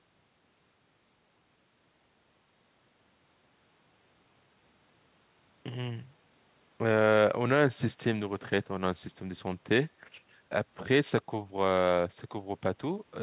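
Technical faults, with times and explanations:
The speech comes over a WebRTC call path using G.711 mu-law at 64 kbps, which carries nothing above 4 kHz, and no technical faults can be heard.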